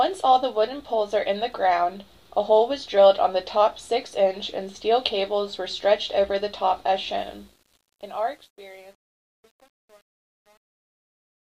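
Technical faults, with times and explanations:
7.18–11.52 s, truncation distortion on a fade: as the fade-out (starting around 7 s) drops, the tail turns gritty, worst from about 7.9 s to the end. The level is being chopped into coarse steps with no dither, which fits roughly 9-bit resolution.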